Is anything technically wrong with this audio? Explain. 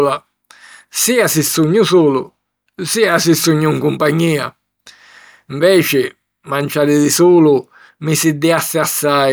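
No, nothing technically wrong can be heard in this speech recording. No faults turn up at any point in it.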